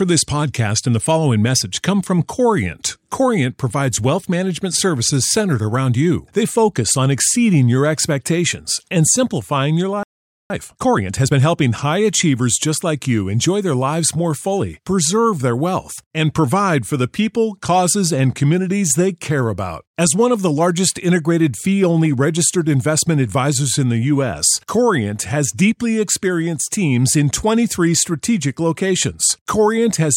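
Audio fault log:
10.03–10.50 s, playback stall: Right after "expectations and simplifying your" the speech cuts off mid-flow and the output goes silent for about 0.47 s before the sound resumes. The likely cause is the player running dry of buffered data or having its output thread blocked. On a waveform this is a flat line of silence with an abrupt edge on each side. A spectrogram shows a clean vertical band of blank across every frequency.
10.50–11.42 s, time-compressed catch-up: Straight after the gap, the speech runs at about 1.5 times normal speed until "high achievers just like", yet its pitch stays natural. The player is working off the backlog from the stall by removing short slices of audio and cross-fading across the joins. A spectrogram shows syllables and pauses squeezed closer together with harmonics at their usual heights. The waveform shows denser, shortened envelopes.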